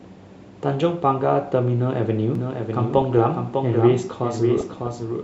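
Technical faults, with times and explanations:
2.35 s to the end, doubled audio track: from 2.35 s a second full-band copy of the speech runs roughly 0.7 s behind the original and some 5 dB quieter. It enters abruptly, with no fade and no reverberant tail or room colour, so it sounds like a flat, dry echo. The likely cause is the signal being captured again through a slower path, or an edit holding two copies out of step. On a spectrogram the harmonic and formant patterns appear twice, the later copy fainter and shifted by a constant 0.7 s. The waveform shows overlapping envelopes from 2.35 s onward.
2.88–3.18 s and 4.58–4.93 s, DAB burbling: in both stretches short blips of noise sit over the speech. Weak DAB reception lets bit errors get past error correction into the MP2 data; corrupted sample values put short blips of noise in single sub-bands, and corrupted scale factors, where they get through, make sub-bands jump in level for up to a frame. 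A spectrogram shows scattered rectangular blocks, each narrow in frequency and at most one frame wide, flaring or dropping out against the normal harmonics. The waveform shows irregular bursts over both ranges.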